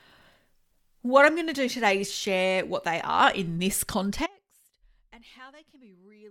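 At 4.26 s, right after "they are in this", there's an audio dropout to a faint residue: the sound drops abruptly to a quiet leak, roughly 25 dB down, through the end, likely a lost feed on a still-live path.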